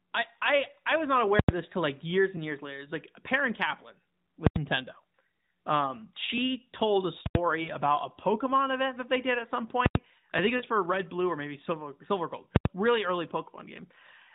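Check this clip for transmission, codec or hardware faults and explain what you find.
Two kinds of fault are present: full-scale invalid-number blocks and lost AMR speech frames. Both sit within the AMR narrowband mobile codec's band-limited sound, which stops at 4 kHz.

Invalid numbers at full scale occur at 1.39, 4.47, 7.26 and 12.56 s, each lasting about 93 ms, which fits a 4096-sample block. Infinite or invalid results were pinned to the maximum value, giving a loud pop at each edge with silence between. Unlike clipping, no sound survives inside the block.

Lost AMR speech frames occur at 7.62 s (about 78 ms) and 10.56 s (about 74 ms), which fits two lost 20 ms frames each. The decoder repeated the last good pitch and vocal-tract settings at falling gain, so the speech briefly drones and fades, then returns rough. Unlike a hard dropout, there is no abrupt gap.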